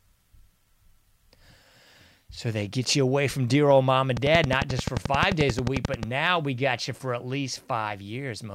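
Speech carrying a train of clicks from 4.17 to 6.04 s, after "dear old mom and" and before "we got you for": about twenty regular pops at 11.3 per second, roughly 15 dB above the voice, likely from nearby equipment interference. On a waveform they appear as evenly spaced spikes, and on a spectrogram as thin full-height vertical lines.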